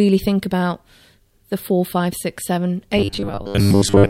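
Robotic sound from repeated short buffers runs from 2.99 to 4.10 s, right after "four five six seven": audio likely arriving too seldom, so roughly two-thirds of it is replaced by repeated 10 ms snippets, imposing a rigid, metallic 100 Hz buzz.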